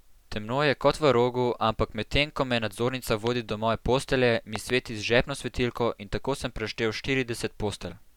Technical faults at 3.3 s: loud pop

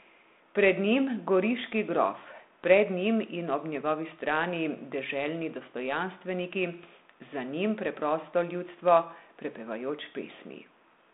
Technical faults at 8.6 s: none

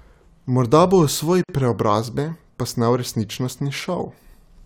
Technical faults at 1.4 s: gap at a join of encoded pieces

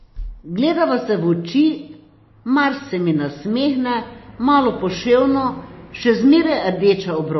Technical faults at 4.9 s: MP3 compression

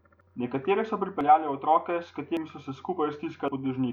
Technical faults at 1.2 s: dropped buffer (overrun)

